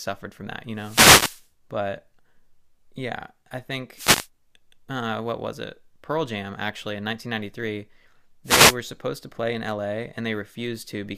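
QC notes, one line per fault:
0.74–1.50 s, 3.94–4.29 s and 8.44–8.77 s: wireless microphone noise hit. Each is a brief swish of static over the speech, the first lasting about three quarters of a second and the later two about a third of a second. The analogue FM radio link momentarily lost signal strength as reflected paths cancelled the direct one, so the receiver's own hiss rose up through the demodulated audio and partly masked the speech.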